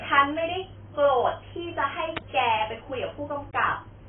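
From start to finish the speech sounds dull and muffled, with nothing audible above 3.7 kHz, and sibilants and held sounds take on a warbling, fizzy, smeared texture. This is heavy AAC compression damage, likely from AAC-LC at a bitrate around 16 kbps. At so few bits the encoder has lowered its cut-off and coarsely quantised what remains, leaving gaps in the spectrum that shift from frame to frame, which produces the swirling artefacts.

At 2.17 s a sharp snap or tight cluster of clicks cuts across the speech, lasting only about a hundredth of a second and sitting on top of the sound rather than replacing it. This is an electrical switching spike, likely a nearby switch, motor or static discharge sending a brief arc into the audio line. Because the burst is so short and broadband, it registers as a hard click.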